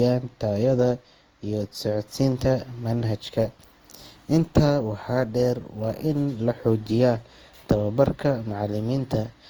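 Generation loss runs through the whole of this speech recording, from start to finish. The sound is swirly and hollow, with smeared consonant onsets and a watery texture beyond what a single lossy encode would leave, and the top of the spectrum stops at about 20.2 kHz. This most likely comes from repeated passes through a lossy codec, which points to Opus at around 48 kbit/s applied roughly five times. Each re-encode quantises on a shifted frame grid, so noise and spectral gaps compound.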